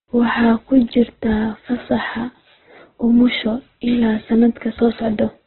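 A speech clip with heavy Opus compression damage throughout: nothing survives above 4.1 kHz, and it sounds rough and grainy rather than swirly. That's likely Opus's music mode starved of bits, which fits around 8 kbps, padding empty bands with folded copies or noise.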